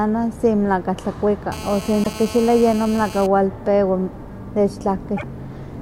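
From 1.52 to 3.27 s a GSM phone buzz sits about 15 dB below the speech: a hard, raspy tone at 217 Hz, steady as in a call, where the audio circuit rectifies a nearby handset's radio bursts. Its rate and dense harmonics set it apart from 50 or 60 Hz mains hum.

Within it, at 2.00 to 2.07 s, and again after it at 5.14 to 5.23 s, damaged data in a compressed stream makes the decoder misread frames and hunt for the next header, giving a brief glitch in the sound.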